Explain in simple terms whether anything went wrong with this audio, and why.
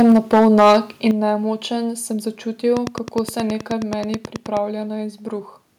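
Two things went wrong, both at the start of this speech clip.

From the very beginning to about 0.77 s, just before "in nemočen", there is microphone overload. The loudest moments sound harsh and crackly, as if the sound is breaking up, because the peaks are chopped off flat. The likely cause is a microphone input set too high, so the loudest parts went past what the converter could handle. What sets this apart from a simple volume change is the distortion itself: the sound is damaged, not just louder.

There are also two moments of microphone volume stepped down, at about 0.12 s and 1.11 s, the second again just before "in nemočen". At each one the whole sound, speech and background together, suddenly drops to a lower level in a single step, and the second drop is much bigger than the first. The likely cause is call software noticing the microphone was too loud and turning its input down. 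Unlike the overload, these drops are clean and add no crackle. They come during and just after the distorted stretch, when the software was reacting to it.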